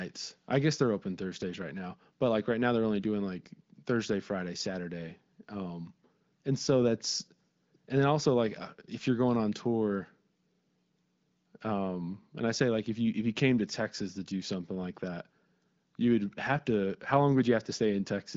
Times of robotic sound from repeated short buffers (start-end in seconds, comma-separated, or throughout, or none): none